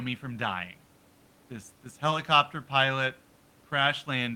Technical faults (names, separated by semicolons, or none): none